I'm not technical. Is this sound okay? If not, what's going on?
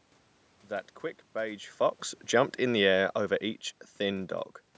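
No. From 2.33 to 3.29 s there's automatic gain falling: the call's volume control turns itself down, so the speech and the room background sink together, unlike a talker simply moving away.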